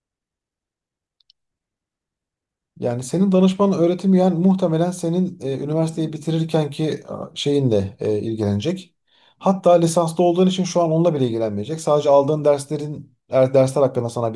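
A speech recording whose signal carries no audible technical faults at any point.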